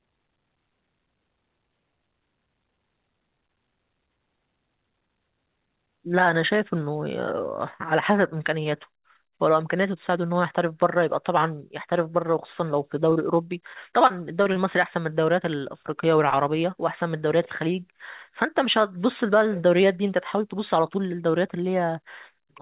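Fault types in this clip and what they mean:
Short concealed packet loss at 13.10 s and 13.13 s: two back-to-back chunks of speech, each about 20 ms, failed to reach the decoder in time. The receiver covered each hole by stretching out the sound just before it, following its pitch where voiced and using shaped noise where not, then crossfaded into the real signal. The result is a quick smear or wobble spanning roughly 13.10 to 13.17 s.
Repeated packet loss (robotic sound) from 13.73 to 14.57 s: across this stretch of speech, four separate holes appear, the longest 20 ms and about 80 ms in total, roughly 9% of the span. Each one is patched by extending the preceding sound, and the next loss follows soon after. This gives a choppy sound with pieces missing, heard within the G.711 call path's band that stops at 4 kHz.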